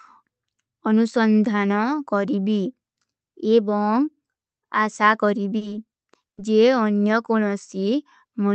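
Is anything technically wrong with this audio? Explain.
Yes, there are two dropouts in this speech.

At 5.57 to 5.63 s there is a short concealed packet loss: about 40 ms of audio never arrived, so the receiver extended the preceding sound and blended back. It is heard as a brief smear, and on a spectrogram it looks like harmonics or noise stretched smoothly across a narrow strip.

At 6.29 to 6.39 s a burst of packet loss removes about 80 ms. The decoder continued the last sound while fading it, then jumped ahead, so a held buzz or hiss replaces the missing speech. The waveform shows a decaying, repetitive stretch, and the spectrogram shows frozen, dimming bands before the resumption. The audio came through an Opus call path whose content stops at 8 kHz, consistent with a rate around 32 kbps.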